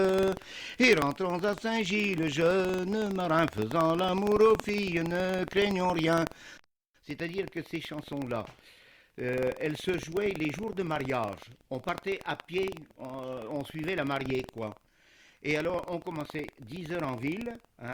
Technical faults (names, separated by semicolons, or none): buffer tearing